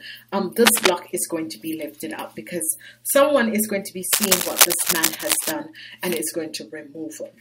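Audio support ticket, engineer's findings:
Cable scratch noise, 0.65–0.91 s and 4.13–5.52 s, the second lasting about 1.4 s. Dense, irregular scratching and rustling bursts over the sound, a few dB louder than the programme itself. Likely cause: a worn cable, connector or control being moved, its contact resistance fluctuating rapidly and injecting noise into the signal path. Check and reseat or replace leads and connectors; exercise or clean any pots in the chain.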